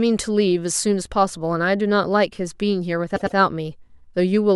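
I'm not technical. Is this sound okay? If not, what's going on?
No. At 3.15 s the speech has repeated frames: a short stretch of about 0.1 s plays twice more, so the audio stutters until 3.36 s and runs about 0.21 s longer. A small run of stored audio chunks was likely written more than once.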